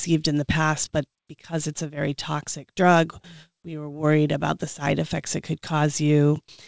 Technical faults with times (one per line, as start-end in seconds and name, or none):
none